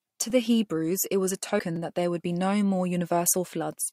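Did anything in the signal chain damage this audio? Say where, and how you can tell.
Yes, a driver-stage repeated buffer at 1.76 s: a 5.33 ms slice replays twice, heard as a brief buzz; the waveform shows identical copies with hard joins.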